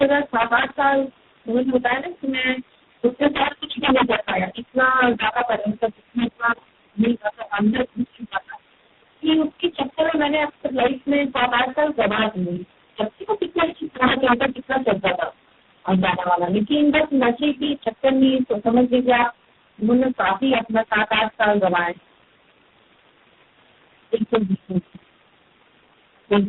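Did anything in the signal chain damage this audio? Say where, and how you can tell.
Yes. At the sample-format conversion or gain stage, an integer overflow runs through the whole clip. The signal was pushed about 8 dB past full scale, and instead of being limited, the samples beyond the maximum wrapped to the opposite sign. Only a small fraction of samples, under one percent, cross the limit, but each one jumps across the entire range. The speech peaks produce harsh, violent cracks throughout, far sharper than ordinary clipping.

At the codec stage, tandem speech coding degrades the entire recording. The call passed through three low-rate speech codecs in sequence: G.729A at 8 kbit/s, AMR-NB at 5.9 kbit/s and finally G.726 at 24 kbit/s, with G.711 links between them. Each codec re-encoded the artefacts left by the one before. The speech sounds rough, muffled and warbly, and there is nothing above 3.8 kHz, which fits a narrowband telephone path.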